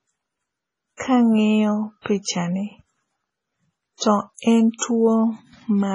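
Across the whole speech clip the treble stops dead at about 10.6 kHz, and what remains has a watery, swirling texture, with faint components flickering in and out between frames and s sounds turning metallic. This is heavy MP3 compression damage. The likely cause is an encoder starved of bits, with the sound pointing to a rate around 24 kbps. The encoder discarded everything above the cutoff and zeroed weaker spectral lines frame by frame.

Pre-echo appears at 0.97–1.00 s, 2.01–2.06 s, 2.22–2.25 s, 3.97–4.01 s, 4.34–4.39 s and 4.78–4.82 s. Each time, a short hiss of roughly 29 to 43 ms leads into a sharp onset, and the attack itself sounds blunted. Each onset landed late in a transform block, so quantisation noise scaled to the loud attack was spread across the block, including the quiet stretch just before it.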